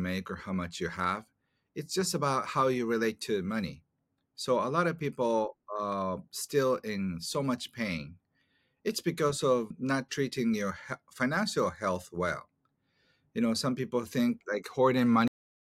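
A cut-off end hits this speech clip at 15.28 s, where the audio stops mid-sound and falls straight to digital silence for the remaining half second or so. There is no decay, no fade and no natural tail, just an abrupt halt. That behaviour means the final buffers of the recording were never written out or played back, so whatever was being said is truncated at the exact point the data runs out.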